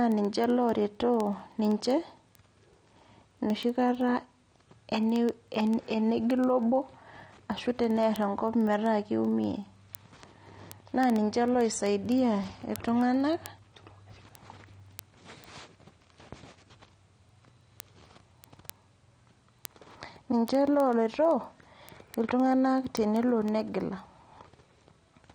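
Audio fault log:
throughout: AAC compression, likely from low-bitrate AAC-LC. The speech sounds dull and smeared, with a fizzy, warbling edge on sibilants. Nothing sits above 9.7 kHz. A spectrogram shows a hard ceiling there and patchy holes across the upper bands.
0.12 to 25.34 s: word clock ticks. Sharp clicks of uneven strength come at a steady rate of roughly one every 70 ms, several hundred in all. An unlocked receiving clock, off by a few hundred ppm, drops or repeats single samples. These show as tiny waveform steps and thin vertical spectrogram lines.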